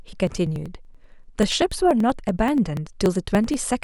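Periodic USB or driver dropouts run from 0.08 s to 3.73 s. Something on the system stalls the USB bus or audio driver every 0.096 s, and each time a few milliseconds of the speech are skipped outright rather than replaced with silence. The audio jumps forward about forty times, roughly ten per second, giving a steady train of ticks or pops that ride on the voice and drop away wherever the signal goes quiet.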